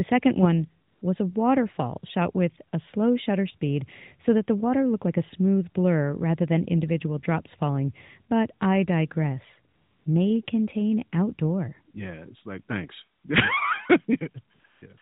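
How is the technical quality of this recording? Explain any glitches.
The recording is narrowband mobile-phone audio with brief comfort-noise dropouts. AMR comfort noise appears at 0.88–1.02, 9.74–10.06, 10.46–10.48, 13.18–13.24, 14.54–14.64, 14.66–14.82 and 14.98–15.02 s. The phone judged these moments silent and stopped sending speech. The receiver filled them with synthetic noise, so the real background briefly becomes a smooth, steady hiss that switches in and out. The AMR narrowband codec itself sounds lightly coloured, with nothing above 4 kHz.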